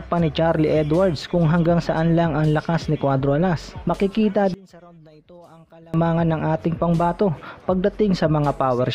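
From 4.54 to 5.94 s the sound collapses to a faint residue about 27 dB quieter, then returns at full body. The likely cause is one channel inverted: one stereo channel's polarity flipped, so material shared by both sides cancels when summed to mono, leaving only their difference. Unlike a dropout, it never goes fully silent. Unlike a simple level dip, the shared content nearly vanishes rather than just getting quieter.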